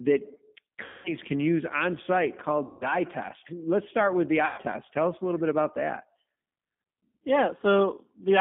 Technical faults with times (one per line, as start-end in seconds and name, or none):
0.00-8.40 G.729 codec
0.84-1.15 VoIP packet loss concealed by the speech codec
2.66-2.98 VoIP packet loss concealed by the speech codec
4.46-4.61 VoIP packet loss concealed by the speech codec